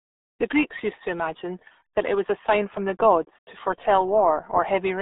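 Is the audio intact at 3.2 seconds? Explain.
No. The RealAudio 14.4 codec damage is present at 3.2 seconds, as it is throughout the clip. Its low-rate speech coding, which fits an 8 kbit/s stream, squeezes the speech into roughly 250 Hz to 3.7 kHz, removing everything above 3.8 kHz, so it sounds heavily muffled and gargly.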